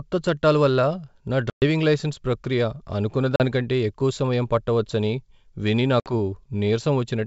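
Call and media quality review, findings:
Packet loss on an ADPCM call: hard-edged silent holes at 1.50–1.63 s (120 ms lost), 3.36–3.41 s (40 ms) and 6.00–6.12 s (60 ms). The decoder predictor is knocked out of sync, so speech comes back slightly distorted before settling. Wideband G.722 path sounds clean, which fits the full 64 kbit/s mode.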